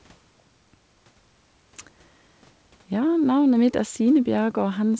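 Listening through this speech recording, nothing stood out as a technical fault.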